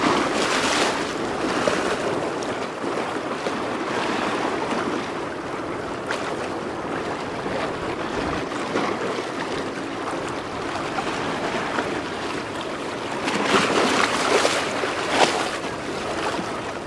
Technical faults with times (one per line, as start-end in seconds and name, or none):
none